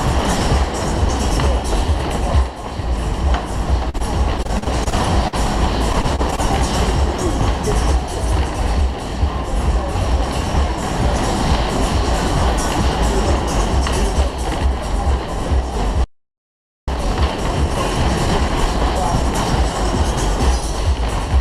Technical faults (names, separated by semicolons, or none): repeated packet loss (robotic sound); playback stall; time-compressed catch-up